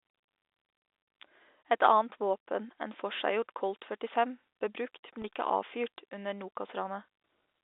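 At 5.22 to 5.24 s there's a packet loss with pitch repetition: about 20 ms of speech dropped out, which fits a single lost packet. The receiver filled it by repeating the last pitch period, so you get a brief held, slightly buzzy moment over the telephone-band G.711 sound.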